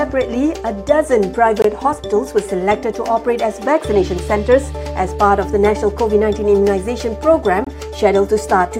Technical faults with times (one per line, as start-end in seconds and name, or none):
1.62-1.64 gap at a join of encoded pieces
7.64-7.67 gap at a join of encoded pieces